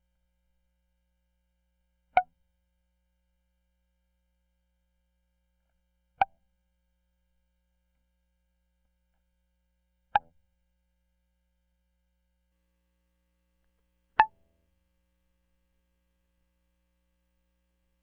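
From the start of the music to about 12.5 s, channel delay (comb filtering) is present: one channel arrives roughly a millisecond and a half late, and when the two are summed to mono, their shared content cancels at evenly spaced frequencies, the first near 400 Hz. The result is a hollow, phasey tone. Unlike flanging, the notches never sweep; unlike plain low-pass dullness, the loss is a series of fixed gaps rather than a smooth treble roll-off.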